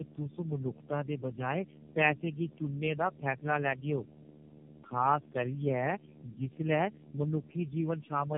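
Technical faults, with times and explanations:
throughout: tandem speech coding. The speech sounds rough, muffled and warbly, with nothing above 3.4 kHz. That fits around four low-rate codecs in a row, such as AMR-NB and iLBC, each re-coding the previous one's already degraded output, so the damage compounds.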